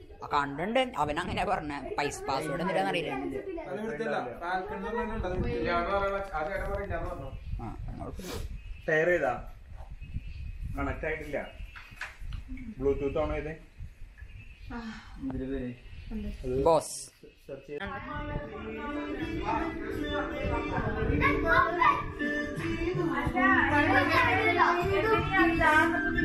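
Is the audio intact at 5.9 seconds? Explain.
No, a train of clicks runs from 5.35 to 6.85 s: regular ticking at 10.7 per second, likely from interference, showing as evenly spaced spikes and thin vertical stripes.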